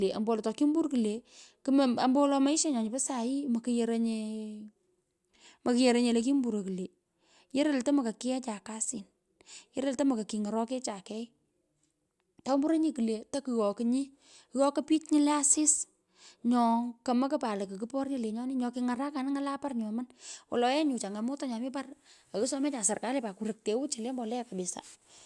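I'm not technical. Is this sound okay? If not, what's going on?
Yes, listening to this recording, nothing stood out as a problem.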